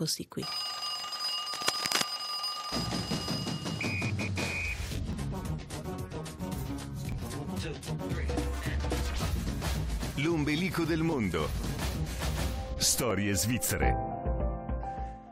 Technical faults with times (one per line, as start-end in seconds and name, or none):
1.15 overlap between stream segments
1.53-2.07 cable scratch noise
5.13-5.15 overlap between stream segments
7.12 overlap between stream segments
11.12 overlap between stream segments
13.11 overlap between stream segments